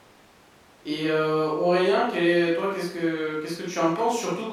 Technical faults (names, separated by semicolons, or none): none